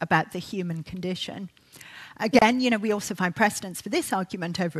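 A gap at a join of encoded pieces opens at 2.39 s and lasts about 29 ms, to 2.42 s. The sound stops abruptly, the edges smeared by the codec, then resumes exactly where it left off. That resumption is what separates it from a dropout or packet loss, where material goes missing. Here, separately encoded pieces were butted together untrimmed, so one piece's padded final frame and the next piece's start-up delay leave silence inserted.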